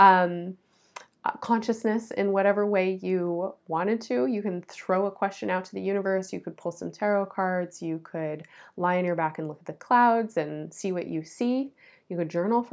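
No dropouts, clicks, distortion or other technical faults are audible anywhere in the speech.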